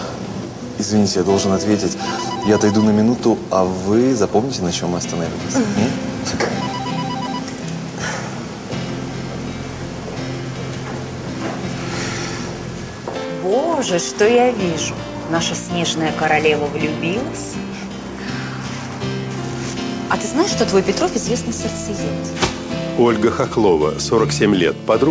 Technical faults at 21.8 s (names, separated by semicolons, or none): none